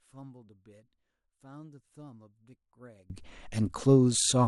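One channel inverted, from 0.0 to 3.10 s of this speech clip: the centred voice drops by about 30 dB, leaving only a faint residue. The likely cause is one stereo channel with reversed polarity, so the material common to both channels cancels when summed to mono.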